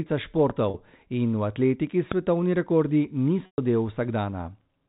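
At 0.50 s there's a loud pop, a single sharp click standing roughly 10 dB above the speech, which keeps going underneath it. It's most likely a voltage spike from a switch, a connector or a driver glitch getting into the signal. A second one lands at 2.12 s, right after "in v atletiki", and it's harder, around 15 dB up. Both are brief, about 20 ms each.

From 0.70 to 0.74 s, just before "in v atletiki svetovni", there's packet loss with pitch repetition. About 40 ms of audio went missing, which fits two 20 ms packets. The receiver covered the gap by looping the last pitch cycle, so you hear a short, slightly buzzy hold. The gap at 3.46 to 3.58 s is longer, about 120 ms. The repeated pitch cycle fades out into silence there, and the speech comes back on a quick cross-fade.

Everything rides on the band-limited G.711 telephone sound, with nothing above 4 kHz.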